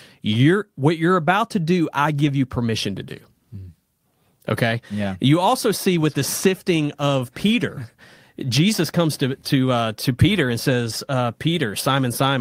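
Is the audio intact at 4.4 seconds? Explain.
Yes, the audio at 4.4 seconds is intact, with no dropout, click, distortion or other fault to be heard at that point in the speech.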